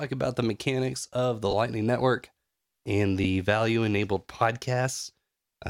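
At 1.51 to 1.53 s, just after "the mechanics of the", there are lost LE Audio frames. The speech breaks into a brief hissy smear lasting about 20 ms. That fits two 10 ms frames going missing over the Bluetooth link. The LC3 decoder filled the gap with the last spectrum and random signs, so tone became noise. The same smear returns at 3.24 s, before "value enabled", and again at 4.94 s. Each of those is a single 10 ms loss.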